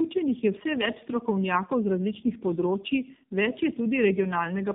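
Speech that sounds rough, muffled and warbly from start to finish, with nothing above 3.7 kHz. This is tandem speech coding, consistent with two low-rate speech codecs applied one after another.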